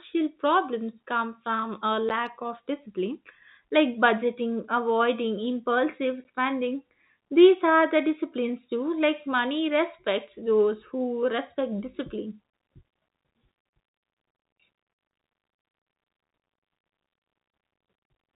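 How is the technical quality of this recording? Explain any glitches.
The recording has two brief dropouts caused by packet loss filled with silence. It passes through G.711 telephone coding, which limits it to the narrow telephone band with only faint coding grain.

At 2.09 s, just before "of discipline like budgeting", and again at 6.24 s, just after "like budgeting avoiding impulsive", a chunk of the audio stream failed to arrive. The receiver had nothing to play, so it inserted a 10 ms gap of pure silence, which fits a single lost 10 ms packet. The speech stops and restarts abruptly.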